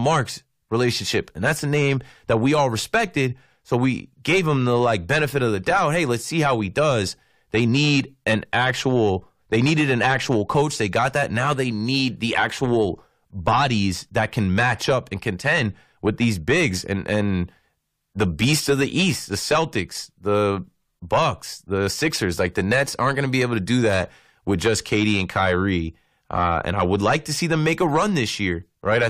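Listening to the speech here, nothing stood out as a technical problem at any point.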